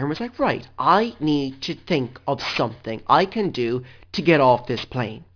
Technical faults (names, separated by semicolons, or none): aliasing